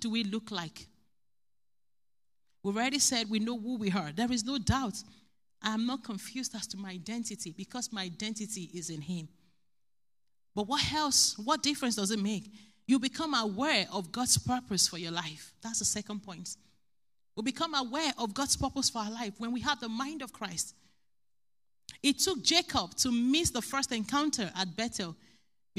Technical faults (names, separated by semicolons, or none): none